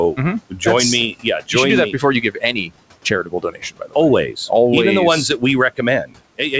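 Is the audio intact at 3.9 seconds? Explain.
No. At 3.9 s the audio sits inside a stretch of speech cut by the noise suppressor, running from 3.1 to 3.96 s. The suppressor misjudged parts of the speech there as steady background noise and pulled those bands down with it, by up to about 17 dB at the deepest point. Roughly 0.4 s of that span is affected, so quiet consonants and word endings come out swallowed and faint.

The same moment also carries the noise suppressor artifacts that run through the whole clip. Frame by frame, the suppressor lowers whatever bands it classifies as steady noise, cutting the room noise by about 18 dB. Around 3.9 s that leaves the background ducking in the pauses and surfacing beneath the speech. All of this sits within the G.722 call path, where nothing is heard above 8 kHz.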